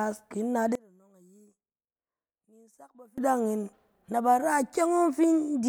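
Speech, and from 0.75 s to 3.18 s, just after "ki in nat", the voice collapses to a faint residue about 28 dB quieter, the likely cause being one channel inverted, so the centred voice cancels when summed to mono. On a waveform the envelope shrinks abruptly across that span; a spectrogram shows the low end and voice harmonics nearly gone, leaving only faint difference energy until full level returns.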